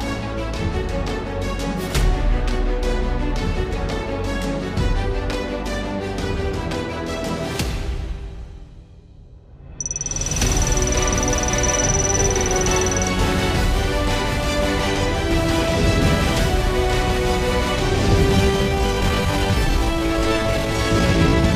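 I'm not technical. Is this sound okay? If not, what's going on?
No. Software likely stretched the ending. From 18.33 s to the end, a time-stretched section plays at 0.73× speed, so it sounds slowed and dragging while the pitch stays the same.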